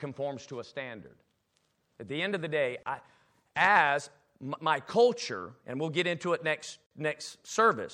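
Speech with a watery, swirly texture, dulled treble and metallic edges on s sounds throughout, likely from MP3 compression at a low bitrate, around 64 kbps. Two brief silences cut into continuous sound, at 2.83 to 2.86 s (31 ms) and 6.86 to 6.91 s (49 ms), four seconds apart. Each is a gap at a join of encoded pieces, left by encoder start-up delay and final-frame padding that were never trimmed.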